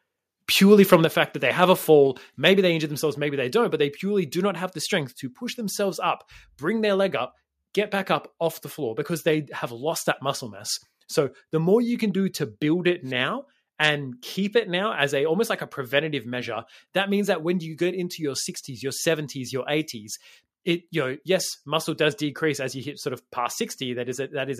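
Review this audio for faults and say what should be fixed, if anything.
Microphone overload, from 0.93 to 0.95 s: the input gain was likely set high enough that a peak drove the converter about 1 dB past full scale, so a small share of samples had their tops cut flat. The result is a brief harsh, crackly edge on that loud moment, a squared-off distortion rather than a clean transient. To prevent it, lower the microphone's input gain so the loudest peaks stay several decibels below full scale.

Microphone volume stepped down, at 1.05 s and 2.07 s: the call software likely reacted to the microphone being too loud or clipping by cutting the device's input volume in single jumps, first by about 5 dB just before "fact that they have", then by about 3 dB between "that they have a" and "maybe they injure themselves". Voice and background drop together each time, so the level drops suddenly. To prevent it, turn off the software's automatic microphone gain adjustment and set a fixed, safe level.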